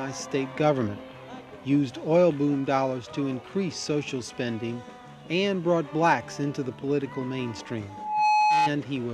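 From 7.89 s to 8.71 s there is loudspeaker feedback squeal: a single tone at 848 Hz that swells over roughly 0.4 s and settles at about 5 dB above the surrounding audio before it stops. A microphone was picking up the loudspeaker it fed, and at 848 Hz the loop gain rose above one, so that frequency kept reinforcing itself on each pass instead of dying away.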